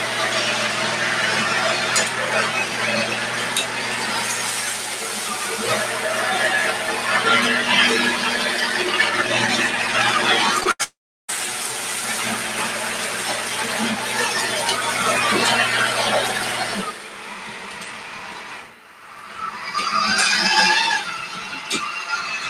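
Throughout the clip a noise suppressor applied to music or sounds, one tuned for speech, treats sustained tones, ambience and decay tails as noise. Gain swings by roughly 5 dB, so attacks pass while held material sinks, giving an audible pumping and thinning of the sound.

From 10.60 to 10.63 s and again from 10.63 to 10.67 s there is short concealed packet loss. About 20 ms of audio is missing each time, and the decoder bridges the gaps of about 12 ms and 19 ms by extrapolating the preceding sound. This produces a quick smear or wobble.

A burst of packet loss follows from 10.71 to 10.81 s. About 80 ms never arrived, and concealment extends the last sound for roughly 79 ms while fading it. The result is a brief held buzz or hiss, and the audio then resumes further along.

From 10.83 to 11.30 s comes what is likely a long network dropout, with about 460 ms missing. The concealed continuation decays, and about 350 ms of silence is left before the sound returns, with the intervening material gone.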